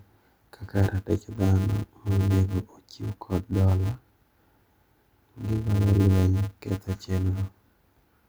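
Throughout the speech, a filter restarted on every block loses its state, leaving a level-following 188 Hz buzz, which fits 256-sample blocks.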